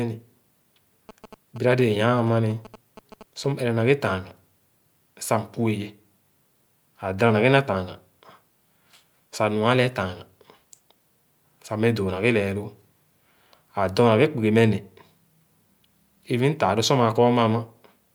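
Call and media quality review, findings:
GSM signalling bursts, 1.09 to 3.46 s. Galloping dit-dit-dit ticks with short 217 Hz buzz, roughly 20 dB below the speech. Probable component: unshielded mic or preamp stage near a 2G handset. Mechanism: the handset's intermittent RF bursts, as when it signals before a call or text, get rectified in the audio circuit. Fix: relocate the phone, add RF filtering at the input.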